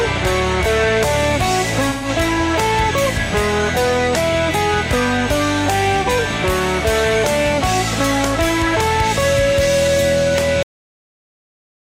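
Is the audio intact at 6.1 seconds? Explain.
No, not quite. A short dropout from AAC frame loss with concealment runs from 6.03 to 6.09 s, ending just before the 6.1 s mark. About 43 ms of audio is missing, which fits a single lost frame. The decoder patches the gap from the last good spectrum, so it sounds like a brief smeared, noisy or phasey blip. On a spectrogram it shows as a narrow blurred vertical band. In the waveform it appears as a short stretch of altered texture.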